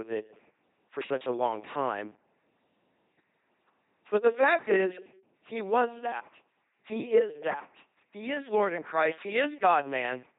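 A buzzing, mechanical robot quality runs through the whole speech clip, with harsh buzz or breathy hiss wherever the voiced and unvoiced parts are mistaken for each other, and nothing above 3.9 kHz. This is heavy LPC-10 vocoder damage. Each moment is rebuilt from a simple vocal tract filter driven by either a pulse train or noise, never a mix, which fits a 2.4 kbit/s LPC-10 coder.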